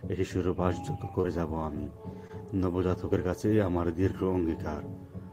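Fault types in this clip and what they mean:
Short concealed packet loss: two brief smears, each a few hundredths of a second long, at about 1.21 to 1.25 s and 2.27 to 2.31 s, where the sound wobbles and then blends back in. About 20 ms of audio failed to arrive in time at each point. The receiver covered each gap by extending the preceding sound for roughly 20 ms and 17 ms, then crossfaded back to the real signal.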